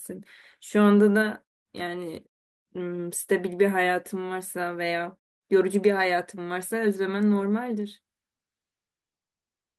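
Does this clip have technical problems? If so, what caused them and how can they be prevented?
No, this speech clip has no technical faults.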